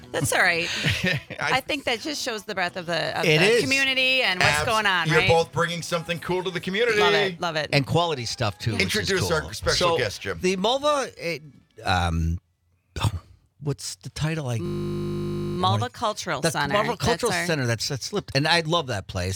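At 14.66 s the sound locks into a system hang loop that lasts until 15.58 s. The system stalled while the playback hardware kept replaying the same 20 ms slice of its ring buffer, about 46 times, producing a steady 50 Hz buzz. Because every cycle is an identical copy, it has none of the irregular spacing of a stutter. When playback resumes, essentially nothing seems to be missing.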